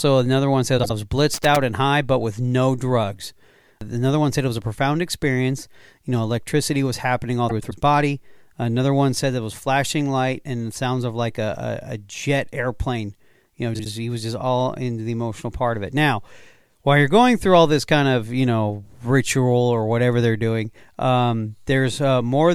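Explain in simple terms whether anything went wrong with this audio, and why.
Two things went wrong. First, frames out of order: small chunks of the digital stream arrived swapped and were played back that way. At 0.78 to 0.91 s and 13.74 to 13.86 s, two neighbouring chunks of about 52 ms trade places. At 7.49 to 7.72 s the swapped chunks are about 104 ms each. Each spot sounds like a brief garbled flutter, though nothing goes missing.

Second, loose connector crackle: a worn or dirty contact kept breaking and remaking the connection, chopping the signal on and off very quickly. From 1.34 to 1.56 s this comes through as an irregular burst of scratchy crackle over the speech.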